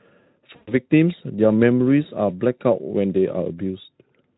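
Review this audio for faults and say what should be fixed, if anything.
From 0.56 to 0.74 s the speech is stretched into a buzzy or noise-like sound that fades. This is VoIP packet loss concealed by the speech codec: 120 ms went missing, and the Speex decoder extrapolated its last pitch and filter with falling gain. Forward error correction or redundant packets would prevent it.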